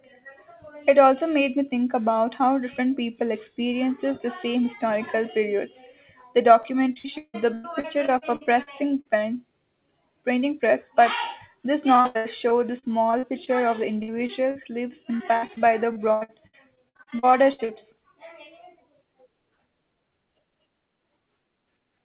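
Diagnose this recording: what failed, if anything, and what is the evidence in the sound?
Repeated packet loss on the network: at 6.62–9.07, 11.95–13.49, 14.03–14.67 and 15.17–17.71 s, missing packets patched by extending the previous sound leave the speech choppy and robotic.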